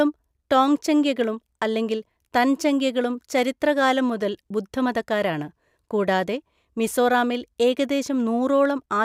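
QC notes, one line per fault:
Nothing stood out on listening to this speech recording.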